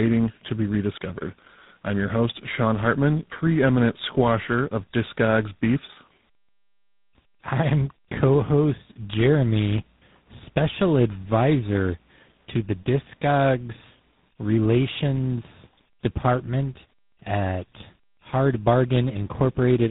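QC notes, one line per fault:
throughout: tandem speech coding. The speech is rough, muffled and warbly, with nothing above 3.8 kHz. This fits three speech coders in a row, ending in something like GSM full rate. Each coder re-encodes the last one's damaged output, so the errors stack up.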